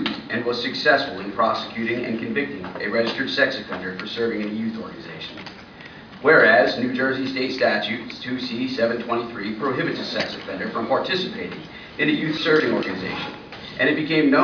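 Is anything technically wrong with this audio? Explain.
No, nothing technically wrong can be heard in this audio. Nothing in the signal points to a problem with how it was captured, processed or delivered.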